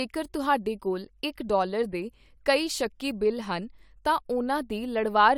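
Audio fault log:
No faults are heard in this speech clip. Nothing in the audio calls for a log entry.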